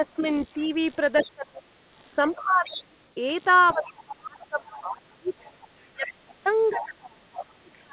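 A computer activity noise buzz runs under the whole recording, pulsing at around 70 Hz and sitting about 25 dB below the speech. Load changes in the machine's processor, graphics or mouse push current through the ground the audio circuit shares, and that ground movement reaches the microphone line as a rough, chirpy buzz. It follows the computer's workload, not the speech, so it stays audible in pauses.

Speech suppressed in double talk appears in four stretches: 0.0 to 1.66 s, 2.29 to 3.01 s, 3.74 to 5.33 s, and 5.88 s to the end. The voice drops sharply, by about 25 dB in the first stretch and about 30 dB in the later ones, and loses words in pieces. The first dip covers about 1 s in total, the second about 0.7 s and the third about 1.5 s. The likely cause is an echo canceller that could not tell the talker from the loudspeaker signal while both sides spoke and attenuated everything.

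The other side's voice leaking through overlaps those dips at 0.2 to 1.26 s, 2.29 to 3.09 s, 3.68 to 4.13 s and 4.69 to 6.85 s. A second voice is heard about 15 dB under the talker, rising to about 10 dB under at 2.29 s. This is likely loudspeaker playback that the echo canceller left partly in the microphone signal. Both voices are heard through the narrow telephone band, with nothing above 4 kHz.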